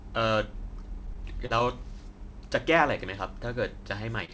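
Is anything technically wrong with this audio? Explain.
Yes, there are two packet-loss problems.

From 1.07 to 1.65 s there is repeated packet loss (robotic sound). Audio packets failed to arrive on time four times in just over half a second, with the longest gap about 36 ms. Each time, the receiver extended the preceding sound to cover the hole. About 69 ms was synthesised this way and about 30 ms was lost outright, so around 12% of the stretch is concealment. Because the gaps come in quick succession, the speech sounds choppy and machine-like.

From 4.25 to 4.31 s there is a short concealed packet loss. A brief run of audio missed the decoder's deadline. The decoder filled about 35 ms by carrying the previous sound forward and then blended back into the real signal, and roughly 30 ms is simply absent. This comes through as a quick smear or wobble near the end of the clip.

The call path itself cuts everything above 8 kHz, which fits a wideband codec such as G.722.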